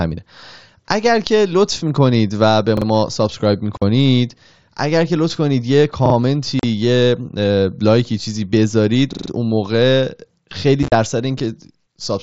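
Playback fell behind three times at 2.77–2.86 s, 6.06–6.14 s and 9.13–9.30 s. Each time a repeated buffer filled the gap: the last piece of about 43 ms, which fits a 2048-sample buffer, sounded again twice, then four times at 9.13 s. The result is a hard-edged stutter.

The headset link dropped voice packets at 3.77–3.82 s (45 ms), 6.59–6.64 s (37.5 ms) and 10.83–10.92 s (60 ms scattered over 90 ms). This unconcealed Bluetooth headset packet loss leaves abrupt holes in the otherwise wideband mSBC speech.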